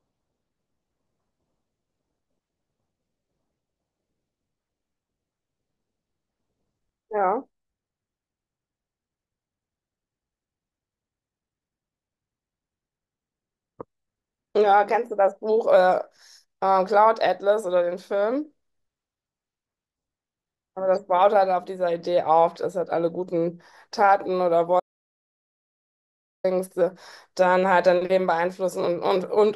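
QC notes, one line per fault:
24.80 to 26.44 s, audio dropout to silence: the speech cuts off mid-flow and about 1.64 s passes in silence, with no room tone, before it resumes abruptly. The input was likely lost briefly while recording continued writing silence, so that stretch is gone.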